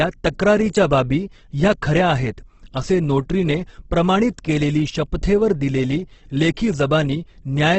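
From start to finish, the speech carries heavy Opus compression damage. Nothing sounds above 8.2 kHz, so the top end is cut off and the audio is wideband only. Consonants and vowels turn grainy, rough and noisy rather than swirling. When bits run short, the encoder fills bands with noise or folded lower content. The thinness points to a very low bitrate, around 12 kbps. The likely cause is Opus in its music mode.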